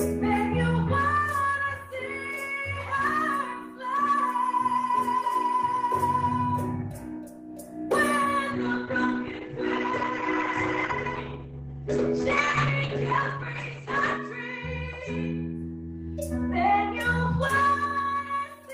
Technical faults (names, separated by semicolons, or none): call bitrate drop